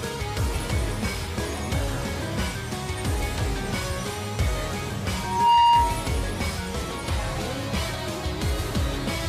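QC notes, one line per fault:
5.15–6.14 s, loudspeaker feedback squeal: a steady 942 Hz tone swells over roughly 0.4 s to about 10 dB above the sound, as the mic-speaker loop gain exceeds one.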